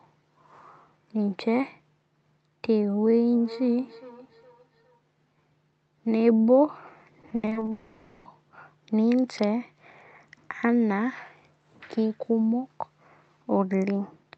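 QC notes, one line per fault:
3.31–5.01 s, feedback echo between two devices: two devices on the same call are sharing a room, so one device's loudspeaker output gets picked up again by the other's microphone. Each stretch of speech comes back roughly every 400 ms, a little thinner and more ringing on every pass. The repeats stay fairly low, at most about 20 dB under the speech. The echo canceller can't catch it because it only subtracts what its own device is playing, not what the neighbour plays.
7.21–7.69 s, repeated packet loss (robotic sound): there are seven separate holes packed into under half a second, the longest about 80 ms. The receiver patches each one by stretching the last bit of sound, and about 200 ms ends up filled that way, which is roughly 42% of the span. Because those patches follow each other so quickly, the audio goes choppy, with small chunks missing between the repaired bits.
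7.71–8.27 s, long network dropout: right after the choppy run, about 540 ms of audio never arrived, likely a proper network outage this time and not more scattered losses. The receiver fills the whole gap by carrying the last sound forward, so you get a fading buzz or hiss with no silence at all. When the audio comes back, the lost section is simply gone. The call path here behaves like Opus at a modest bitrate with the top end capped around 8 kHz.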